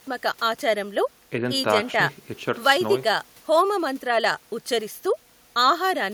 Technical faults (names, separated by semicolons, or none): none